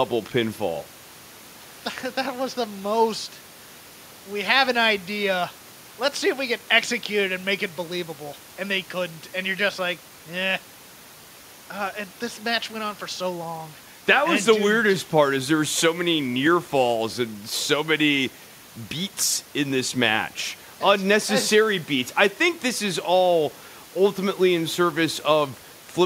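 There are no technical faults to describe in this speech recording; the only background sound is the room noise, sitting about 27 dB below the speech.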